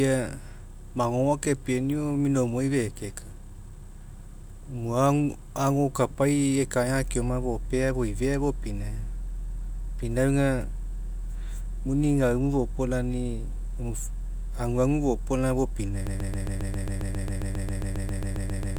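At 16.07 s the speech collapses into a broken-record loop that runs to the end of the clip. A fragment about 135 ms long repeats exactly and back to back, 20 times, producing a rapid, mechanical stutter with no forward progress. The likely cause is a stall in the player, encoder or stream, which kept resending the last buffered piece. Whatever speech belonged in those final seconds is lost.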